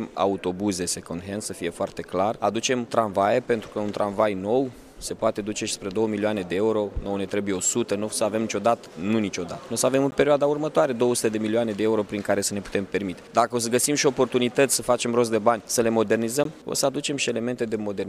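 A block of digital silence hits the audio at 10.11 s and again at 16.44 s, each a hole of about 13 ms and 15 ms respectively. In each gap the sound cuts out and returns with no fade, and the whole event reads as a brief tick rather than an audible pause. Dropouts this short and abrupt point to an output buffer that was not filled in time.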